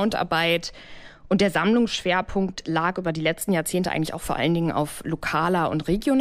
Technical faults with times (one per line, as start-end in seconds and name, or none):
0.59-3.41 channel delay (comb filtering)